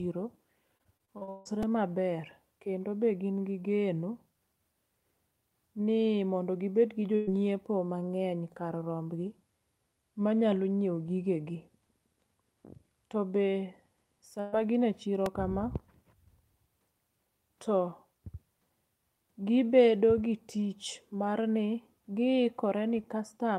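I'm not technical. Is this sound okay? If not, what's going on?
No. There are three kinds of fault in this speech.

The first is repeated packet loss, which makes a robotic sound. It runs from 0.77 to 1.47 s. In that short stretch, pieces of audio went missing seven times. Each time, the system covered the hole by stretching the last bit of sound. Almost half of that stretch is this filler. The longest hole is about 160 ms. So the speech there sounds choppy, with pieces missing.

The second is a repeated buffer. It happens at 1.63 s and again at 15.26 s, just after "ma gin e chiro". New audio arrived late. So the player repeated its last tiny chunk, under 3 ms long, which fits a 128-sample buffer. At 1.63 s that chunk plays twice more, and at 15.26 s once more. Each repeat is too short to hear as a stutter. You hear a quick click or buzz instead.

The third is a burst of packet loss. It happens twice. 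The first is from 7.15 to 7.29 s, right after "gi bed gi jo". The second is from 14.40 to 14.54 s, just before "ma gin e chiro". Each time, about 120 ms of audio never arrived. The gap was covered by holding the last sound, so you hear a brief buzz or hiss. Then the speech jumps ahead, and that piece is gone.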